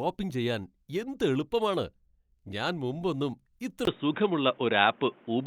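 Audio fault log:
3.85–5.47 s, input switched to a poorer device: after a 20 ms gap the speech goes dull, nothing above 3.8 kHz, faint new background noise, level shifts a few dB, likely a mic change.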